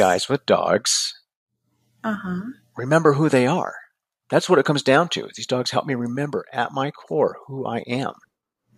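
Speech, with a sudden gain jump at 6.16 s. The level drops by about 4 dB in one step and stays down to the end. Voice and background noise fall together. The likely cause is a digital gain change applied without a ramp.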